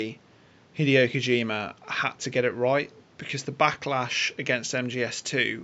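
Nothing in the system goes wrong anywhere in the speech, and the only extra sound is the room's own background hush, sitting about 31 dB below the talking.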